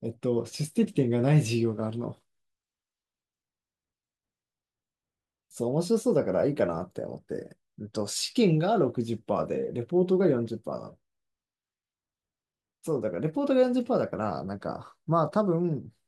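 Listening closely to the speech, nothing stood out as a technical fault at any point.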